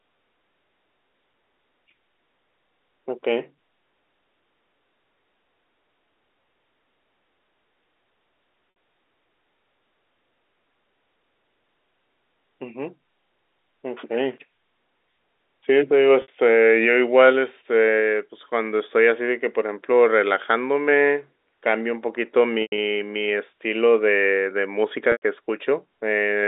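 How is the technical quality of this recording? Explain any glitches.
There are four dropouts from packet loss with pitch repetition, heard over a G.711 telephone line whose band tops out around 3.7 kHz. Around 8.70 s and 16.22 s, about 60 ms goes missing each time, and the receiver loops the last pitch period as a brief buzzy hold. At 25.12 s (100 ms) and 22.62 s (about 120 ms lost over 160 ms), that loop fades toward silence before the speech cross-fades back in.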